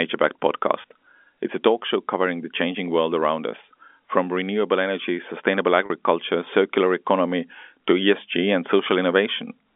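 Packet loss with pitch repetition at 0.82 to 0.84 s and 5.86 to 5.90 s (after "from renewable energy sustainable"): 20 ms and 40 ms gaps, bridged by repeating the last pitch period, give briefly held, buzzy sound.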